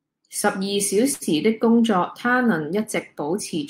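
At 1.13 s to 1.23 s the speech hangs on a short stall from a late packet: the jitter buffer emptied, so the receiver stretched the last sound for about 78 ms, then resumed exactly where it stopped. Nothing is lost, but a sound is held too long, with a faint buzzy dip.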